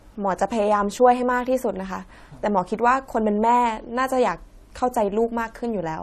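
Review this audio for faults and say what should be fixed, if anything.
Throughout the speech there is nothing above 13.9 kHz. Two different kinds of coding artefact are heard together. This is likely transcoding between lossy codecs. The sound fits an MP3 stage at a low rate, around 64 kbit/s, followed by AAC-LC at a still lower rate. The second encoder wastes bits on the first one's artefacts and adds its own. The lowest cut-off survives. To prevent it, encode once from the original uncompressed source.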